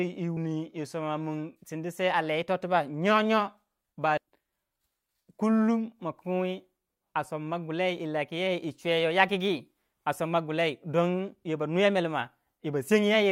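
Speech with two brief bursts from damaged data in a compressed stream, at 0.37 s and 4.18 s, where corrupted bytes make the decoder misread frames and lose sync. Each is heard as a chirp, squawk, click or short hole.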